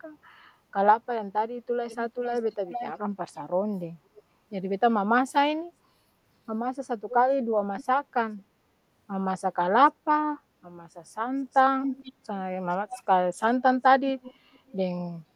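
Speech with a delayed repeat trailing it by 0.46 s at 1.89–2.92, 3.34–3.39, 4.16–4.23, 7.10–7.14, 7.78–7.84, 11.52–12.13, 12.72–13.03 and 14.22–14.72 s, ranging from barely audible to nearly as loud as the speech around 11.5 s. This is likely echo leak: a far-end loudspeaker was picked up by its microphone, and the echo canceller failed to remove it.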